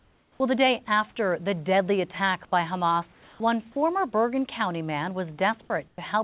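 Comfort noise in place of the background occurs from 0.0 to 0.4 s, just before "the day after the", and again from 3.12 to 3.4 s. In both pauses the faint room background, sitting about 40 dB and about 30 dB below the loudest sound, turns into a smooth, featureless hiss, about 5 dB and then about 3 dB quieter. This is likely the sender's discontinuous transmission stopping during silence and the receiver synthesizing noise to fill the gap.

Sound dropped by the voice detector occurs from 5.88 to 5.98 s. A 40 ms piece of sound disappears and 100 ms of the same flat noise takes its place. The likely cause is the detector mistaking that sound for background and stopping transmission. Throughout the clip, nothing is heard above 4 kHz, which fits a narrowband G.711 call.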